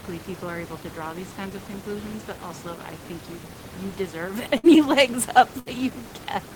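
At 4.57 s and again at 5.59 s, the speech breaks with a burst of packet loss. Each time, about 60 ms of audio never arrived. The receiver stretched the last sound over the gap and faded it out. Speech then resumes slightly later.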